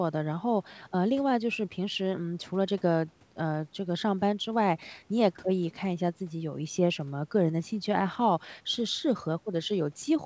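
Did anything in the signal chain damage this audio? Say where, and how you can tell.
No, nothing in the chain damaged this speech. It has passed through a call's microphone processing and a G.722 call path at 64 kbps, which is why nothing reaches above 8 kHz, and that band limit is normal for wideband call audio.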